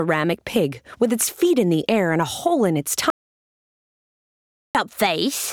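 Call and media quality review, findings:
Audio dropout to silence, 3.10 s to 4.75 s, about 1.65 s lost. Probable component: capture path, likely a momentary device disconnect, failed link or stray mute while the recorder kept writing silence. Effect: sound cuts off mid-flow and resumes mid-flow; the gap is silent with no room tone or noise floor, and whatever occurred during those 1.65 s is unrecoverable.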